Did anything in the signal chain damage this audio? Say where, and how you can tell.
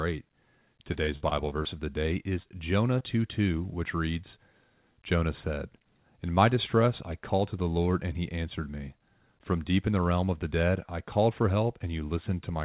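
Yes, on the network side. Repeated packet loss (robotic sound) from 0.94 to 1.67 s, just before "of the day": six gaps up to 30 ms, each patched, giving a choppy stutter.

Two bits of short concealed packet loss follow, at 2.43 to 2.47 s, right after "of the day", and 2.99 to 3.02 s. The decoder stretched the last sound over each hole, so you hear a brief smear, all within audio band-limited to 4 kHz by the call codec.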